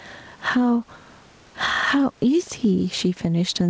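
Speech with gain pumping running through the whole clip, with the level swinging by around 10 dB. The likely cause is input gain set far too high with a fast limiter pulling the level down on every peak. On a waveform the envelope looks flattened, with loud and quiet passages squeezed toward one height. Energy stops at 8 kHz, which fits the G.722 call codec carrying the audio.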